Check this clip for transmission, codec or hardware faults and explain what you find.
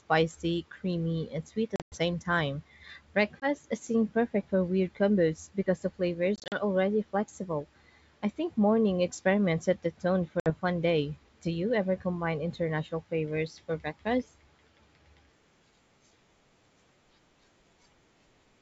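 The speech shows packet loss on an ADPCM call, heard as four dropouts over a wideband line whose sound fits G.722 at 64 kbit/s.

Packet loss on an ADPCM call occurs at 1.76–1.97 s (140 ms lost across 160 ms), 3.40–3.48 s (20 ms, just before "seemed perfect for weird"), 6.36–6.58 s (100 ms, between "weird combos because the" and "already flexible I think") and 10.40–10.50 s (60 ms, between "experiments set the tone" and "fun day"). Missing packets become silence, leaving the decoder's predictor and step size mismatched with the sender's. Speech then returns at the wrong level or with a click and some distortion, settling within tens of milliseconds. A spectrogram shows hard-edged blank columns, and the waveform goes flat at each gap.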